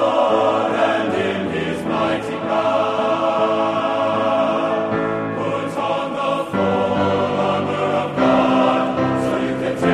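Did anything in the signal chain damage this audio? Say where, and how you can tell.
No, nothing in the audio stood out as a sign of damage anywhere along the signal chain when I listened.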